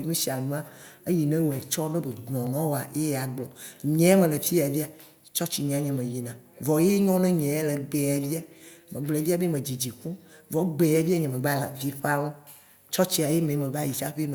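A speech recording with a single sharp click at 2.47 s, a brief tick that shows up as a thin vertical line through the whole spectrum. The likely cause is dropped samples: a stretch of about 0.7 ms went missing from the stream, so the waveform leaps straight from one value to a later one. The gap is far too short to remove any audible sound, so only the discontinuity itself is heard.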